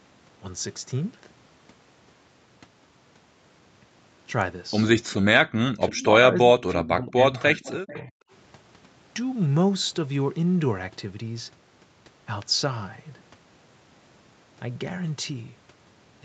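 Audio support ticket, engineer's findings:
Speech suppressed in double talk at 5.88–6.11 s, 6.32–7.35 s and 7.52–8.14 s, with level dips of about 15, 20 and 35 dB. Likely the echo canceller clamping near-end speech while the far end is active. On the waveform the envelope shows notches, and on the spectrogram the upper bands thin or blank in patches.

Echo leak at 5.96–6.03 s, 7.62–7.71 s and 7.88–8.07 s: short, faint copies of the voice trailing by 342–359 ms, about 20–25 dB under the speech. This is likely residual loudspeaker pickup that the canceller missed. On the spectrogram it looks like a weak, time-shifted ghost of the earlier harmonic pattern.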